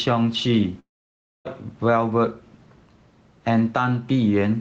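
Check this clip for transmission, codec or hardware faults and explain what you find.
Two faults stand out in this speech clip, heard over a call path whose audio stops at 8 kHz, consistent with Opus at a wideband setting.

Long network dropout, 0.79 to 1.48 s: the incoming audio stops, likely because a run of packets never arrived. The receiver stretches the last sound into a briefly fading buzz, then about 0.6 s of near silence follows before speech resumes with that stretch missing.

Gain pumping, throughout: the gain ducks under each loud syllable, a swing of about 5 dB. This is likely a fast limiter or compressor repeatedly pulling down an input gain set too high, squashing loud and soft parts closer together.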